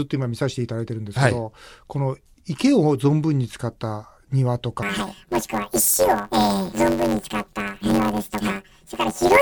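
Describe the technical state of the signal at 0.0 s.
The audio is intact at 0.0 s, with no audible fault at that moment.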